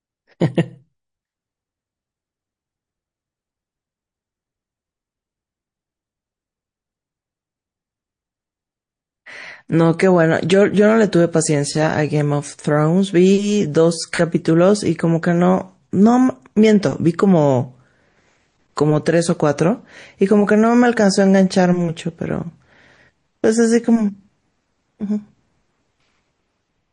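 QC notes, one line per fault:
throughout: MP3 compression. The speech has a watery, swirling quality, with sibilants carrying metallic chirps as weak frequency components flicker in and out between frames. Consonant onsets are smeared. The damage is plainly audible and fits a low-bitrate encode around 40 kbps, where the encoder runs short of bits and discards detail its hearing model ranks as unimportant. Lossy MP3 coding is the likely cause.
18.75–18.77 s: pre-echo. A hiss of about 25 ms, roughly 18 dB above the surrounding floor, leads a sharp onset that itself sounds softened. The transform spreads quantisation noise evenly across its block, so noise sized for the loud attack also fills the quiet stretch before it. The spread fits a block of about 52 ms, which points to the encoder never switching to short blocks for this transient.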